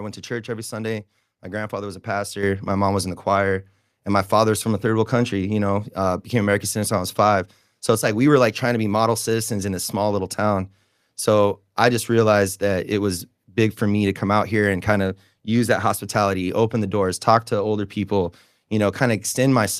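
A microphone volume step-up hits this speech clip at 2.43 s: the call software raised the input gain by about 6 dB at once, lifting voice and background together.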